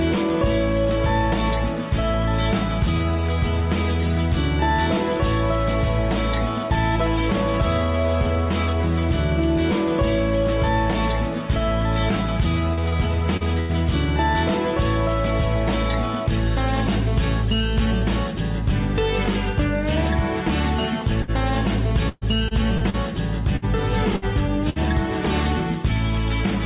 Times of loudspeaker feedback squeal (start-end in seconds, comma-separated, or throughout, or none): none